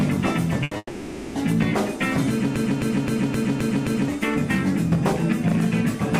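At 0.63 s a burst of packet loss begins. It lasts until 0.73 s. About 80 ms of audio never arrived in time. The receiver covered the hole by carrying on the last sound it had, fading it as the gap went on. So the sound smears into a brief held buzz or hiss. When the audio returns, it has skipped ahead. Those 80 ms are simply gone.

Just after, at 0.77 s, a long network dropout sets in. It runs to 1.37 s. This is likely a stretch where nothing reached the receiver at all. For about 580 ms the last sound is stretched out and faded, an unnatural hum or hiss that thins away. Near the end there is roughly 30 ms of silence. Then the audio resumes further on, with the missing part lost.

From 2.56 s to 4.08 s there is a broken-record loop. A fragment of about 262 ms plays six times, back to back. Each pass is identical, so it stutters mechanically. The likely cause is a stalled player, encoder or stream that kept resending the last piece it held. 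Meanwhile the new audio for that span never plays. When the loop ends, the sound jumps forward.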